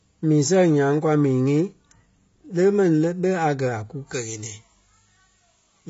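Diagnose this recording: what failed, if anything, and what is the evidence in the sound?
The whole speech clip is dull and smeared, with nothing above 7.5 kHz and a plainly audible warbly, fizzy texture on sibilants. That's codec damage, likely AAC compression at a low bitrate, with a sound that fits roughly 24 kbps AAC-LC starving the upper bands.

From 4.13 s, right after "a kú", to the end, the treble jumps up to about 11 dB hotter around 10 kHz relative to 1 kHz, so the sound turns thin and sibilant. That's pre-emphasis left on, fitting a J.17 curve whose matching de-emphasis never got applied.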